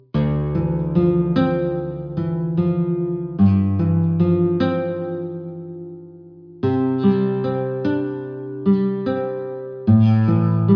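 Nothing technically wrong can be heard anywhere in this audio. No fault turns up at any point, so there are no times or causes to report.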